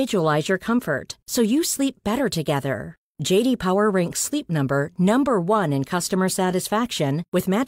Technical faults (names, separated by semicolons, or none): none